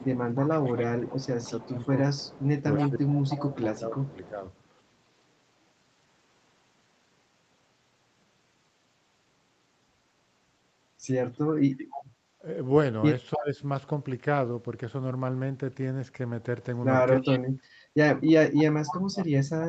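From 0.0 to 4.3 s, a far-end echo canceller likely failed to remove its loudspeaker pickup, so an echo leak returns a delayed copy of the speech 306 ms behind, at about 15 dB down. Over the same stretch, the canceller likely mistook double talk for echo and suppressed the near-end speech by about 15 dB, first from 0.07 to 1.8 s, then in pieces between 2.9 and 4.44 s, so the speech dips and thins. At 11.78 to 12.03 s the echo leak briefly returns with the same 306 ms delay. From 13.34 to 13.6 s, speech suppressed in double talk drops by about 20 dB. Finally, from 17.17 to 19.36 s, double-talk suppression cuts deepest, up to about 40 dB, so the speech nearly vanishes in patches. Within that stretch, from 17.25 to 18.95 s, the 306 ms echo leak grows louder, at about 10 dB below the speech.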